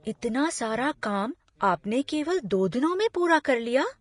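Throughout the speech, the top end stops at 10.5 kHz and the treble has a hissy, grainy texture. This is plainly audible damage, likely from Vorbis compression at a low bitrate around 33 kbps, where coarse quantisation turns fine high-frequency detail into noise.

At 1.01 s a brief pre-echo precedes an attack, spreading about 13 ms ahead of it. Quantisation noise sized for the loud onset fills the quiet instant before it within the same transform block, giving a short hiss and a softened, smeared attack.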